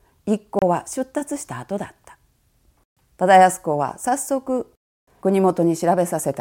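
The speech cuts to silence at 0.59, 2.84 to 2.97, and 4.93 to 5.07 s. Each gap has abrupt edges or a fade of a few milliseconds. This is likely a Bluetooth dropout, where late packets were discarded.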